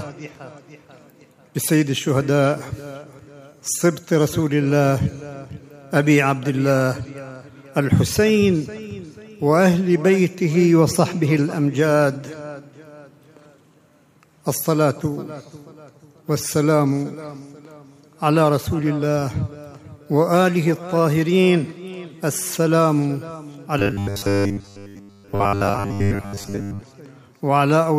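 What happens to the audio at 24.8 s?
At 24.8 s you're right in the middle of a stretch of robotic sound from repeated short buffers, running from about 23.79 to 26.81 s. The sound turns into a stiff, metallic buzz pitched at 100 Hz. That's likely new audio arriving too slowly, so the playback keeps looping a short chunk, which fits a 10 ms buffer, while the real material gets skipped. Most of that stretch is repeats rather than fresh audio.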